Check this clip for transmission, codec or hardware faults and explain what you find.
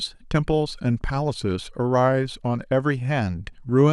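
No faults detected.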